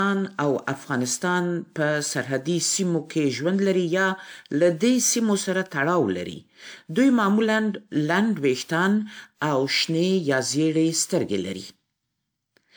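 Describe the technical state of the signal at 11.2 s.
At 11.2 s the speech sounds swirly, hollow and smeared, with blurred attacks, as it does throughout the clip. This is generation loss, likely from repeated lossy re-encoding, about four times, consistent with 128 kbit/s WMA, each pass adding fresh quantisation noise and spectral holes, with nothing above 20.1 kHz.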